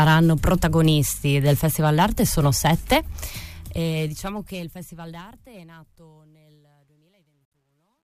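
The audio fades out from around 3.3 s, and from 3.26 s to 8.14 s shows truncation distortion on a fade. It is worst from 5.87 s, where the tail turns gritty, consistent with about 11 bits kept without dither. A clean fade would stay smooth.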